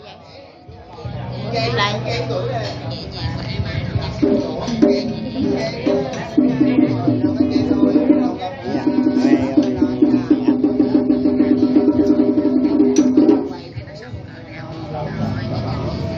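Nothing is technically wrong with the audio in this clip, so there are no times or causes to give.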